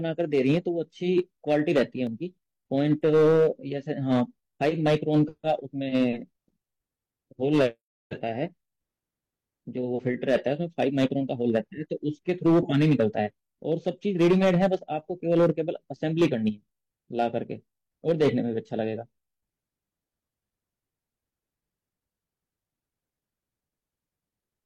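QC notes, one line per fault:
Throughout: hard clipping. The level runs about 8 dB hotter than the chain can pass, so the peaks get sheared flat, though only a small share of samples actually hit the ceiling. Those squared-off tops throw harmonics way up high, so you get crackle riding on the louder bits.
2.07 s: damaged data in the compressed stream. A chunk of the encoded stream is corrupt, so the decoder can't parse those frames, loses its place and hunts for the next good header. You hear it as a brief glitch, maybe with a skip forward.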